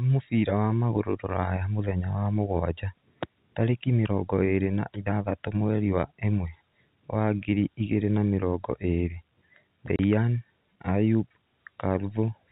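At 9.96 s the speech drops out for 30 ms, ending at 9.99 s: packet loss filled with silence, which fits a single lost packet. Unlike concealed loss, nothing is smoothed over. The hole is silence with abrupt, hard edges.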